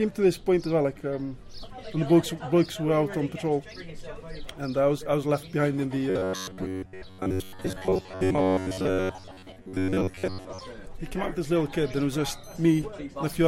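From 6.10 to 10.61 s there's robotic sound from repeated short buffers, a rigid 93.8 Hz buzz, likely from roughly 11 ms snippets looping most of the time.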